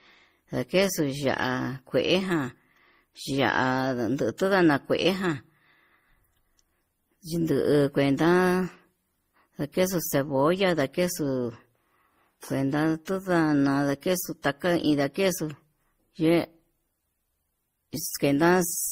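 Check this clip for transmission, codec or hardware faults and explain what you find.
The speech carries one fault throughout: transcoding between lossy codecs. Nothing sits above 16 kHz. Mixed smearing and swirl point to a low-rate MP3 likely re-encoded by Opus, each stage compounding the last.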